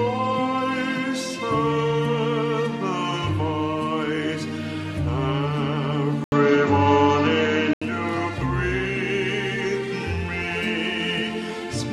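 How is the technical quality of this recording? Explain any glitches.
The recording has one fault. From 6.24 to 7.81 s, the sound narrows to nothing above 7.6 kHz after an 80 ms gap, likely an input switched to a poorer device. The level shifts about 5 dB, and new noise sits about 40 dB down.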